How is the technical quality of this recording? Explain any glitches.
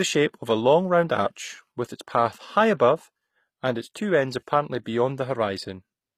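The recording has plainly audible compression damage throughout the speech, and nothing is present above 14.9 kHz.

HE-AAC compression, throughout the 6-second clip: this is likely the cause, and the damage fits a low bitrate around 24 kbps. The codec encodes only the lower spectrum and synthesises the treble by copying lower bands upward under a coarse envelope. The top end therefore sounds artificial. Sibilants come out gritty, metallic or lispy, because the rebuilt harmonics don't line up with the real ones.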